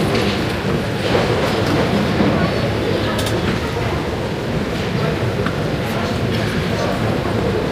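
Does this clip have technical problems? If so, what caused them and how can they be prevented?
No, the recording shows no technical faults, and there is nothing to prevent.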